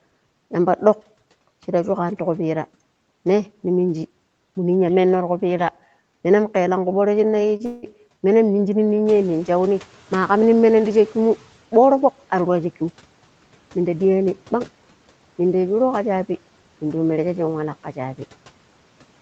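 At 7.56 to 7.62 s a sound is held slightly too long with a slight buzz or dip: a short stall from a late packet, stretched for 30 ms until it arrived, with nothing lost.

From 7.65 to 7.85 s the sound smears into a fading buzz or hiss for about 170 ms and resumes with 60 ms gone, likely a long network dropout.

When the room noise jumps by about 11 dB near 9.0 s, it comes through with less reduction at first, then gradually sinks by about 10 dB until 11.54 s. This is the noise suppressor catching up, taking 2.49 s to adapt its estimate.

Between 12.35 and 12.89 s the speech sounds hurried at unchanged pitch, running at 107% speed. This is a jitter buffer speed-up that trimmed around 50 ms of pitch periods to reduce the delay.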